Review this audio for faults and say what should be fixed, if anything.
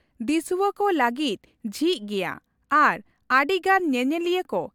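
No faults turn up anywhere in the speech. Nothing here needs fixing.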